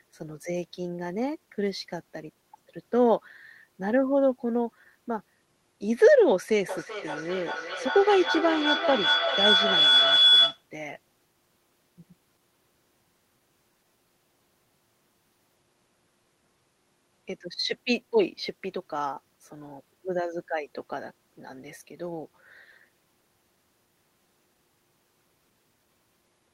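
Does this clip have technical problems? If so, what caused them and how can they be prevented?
Yes. Feedback howl, 6.69 to 10.65 s: a speaker-to-microphone loop gains each pass, building a tone near 3 kHz, pulsing every 400 ms, about 5 dB above speech. Prevent it by muting extra devices in the room or using headphones.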